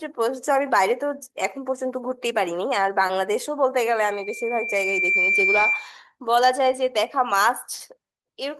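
At 3.07 to 3.12 s, short concealed packet loss: about 20 ms never arrived, and the decoder extended the preceding sound, leaving a brief smear rather than a silent dropout. From 3.92 to 5.94 s, loudspeaker feedback squeal: the microphone-loudspeaker loop exceeded unity gain at 2.4 kHz, and the tone swells over roughly a second to a few decibels above the speech, unlike a steady interfering tone.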